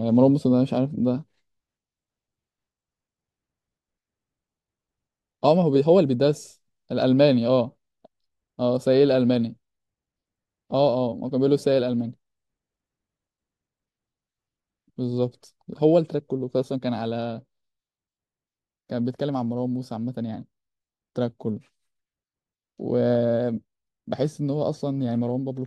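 At 16.63 s the speech suddenly drops by about 4 dB and stays at that lower level until the end. This sudden gain jump likely comes from a digital gain setting applied from one sample to the next with no ramp. Unlike a fade or a compressor pulling the level down, the change is instant, not gradual, and the background noise falls by the same amount as the speech.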